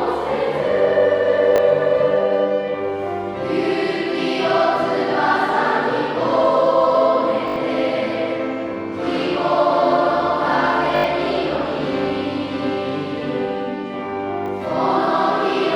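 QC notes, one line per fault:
1.56–1.58 s and 14.46–14.48 s, repeated buffer: fresh audio arrived late, so playback reused the last block once, which fits a buffer of about 20 ms. The doubled slice meets itself at a hard join, heard as a short stutter, click or brief buzz, and roughly 20 ms of sound is skipped.
7.48–7.56 s and 10.96–11.04 s, repeated buffer: the same block was replayed four extra times, giving a short stutter, click or brief buzz at a 20 ms repeat rate, with about 70 ms of sound lost.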